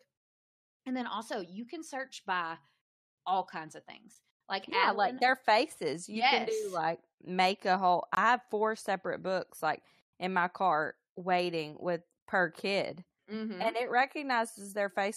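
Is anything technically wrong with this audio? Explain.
Yes. There is a gap between stream segments at 4.15 s (10 ms) and from 8.15 to 8.17 s (21 ms). Mismatched time stamps at 4-second segment joins leave holes the player fills with hard-edged silence. Unlike a dropout, nothing is lost; the sound simply resumes slightly later.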